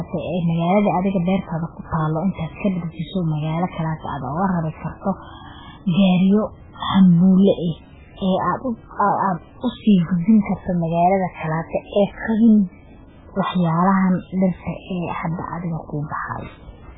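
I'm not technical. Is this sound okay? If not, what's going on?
No. For the whole clip the speech sounds watery and swirly, most likely from heavy MP3 compression. Nothing above 3.8 kHz survives. Unlike a simply muffled recording, faint details keep flickering in and out, giving s sounds a metallic, chirpy edge.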